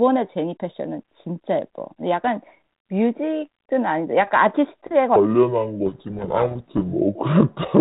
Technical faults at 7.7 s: section at the wrong speed

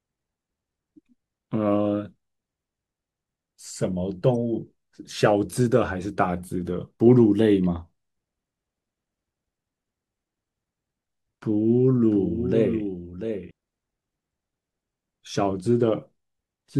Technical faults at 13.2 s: doubled audio track

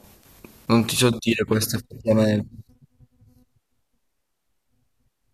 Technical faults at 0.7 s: none

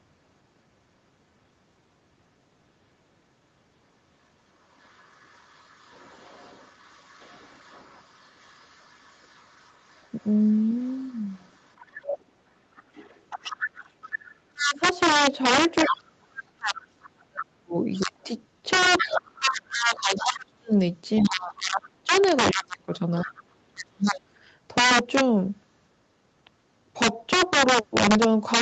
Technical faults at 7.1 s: integer overflow; other side's voice leaking through

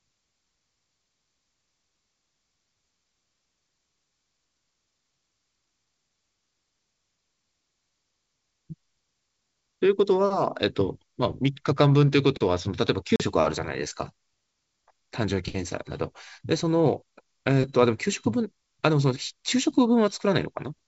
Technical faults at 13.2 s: packet loss on an ADPCM call

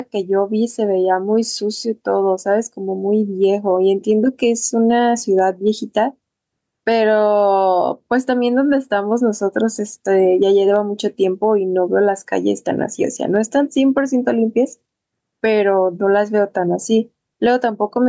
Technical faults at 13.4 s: gain pumping

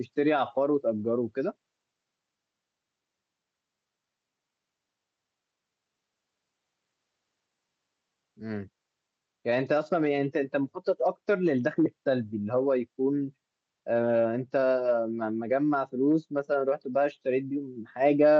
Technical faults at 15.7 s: none

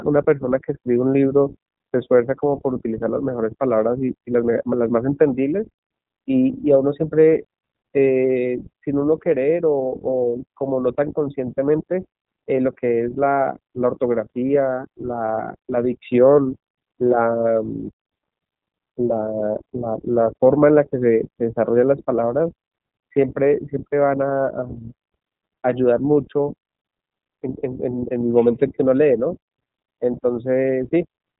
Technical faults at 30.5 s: iLBC codec

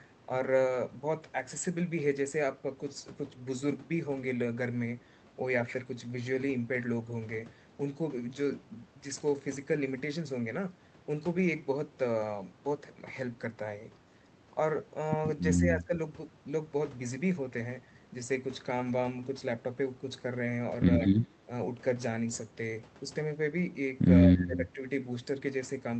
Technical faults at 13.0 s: none

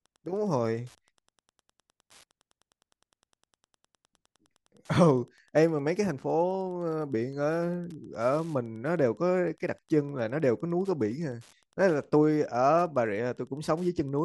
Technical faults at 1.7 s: Wi-Fi interference

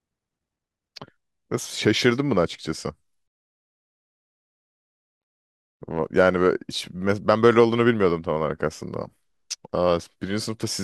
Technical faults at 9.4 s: none

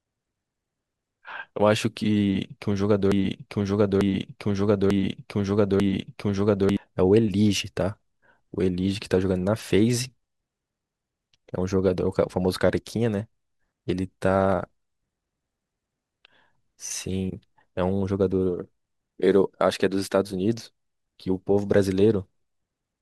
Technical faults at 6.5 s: broken-record loop

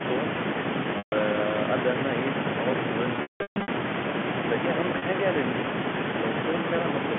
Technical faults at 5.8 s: none

